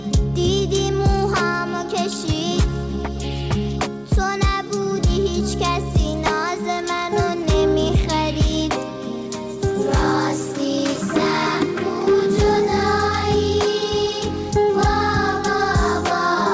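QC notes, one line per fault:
Nothing to flag here, just the call path doing its usual job with nothing above 8 kHz, which fits a G.722 link at 64 kbps.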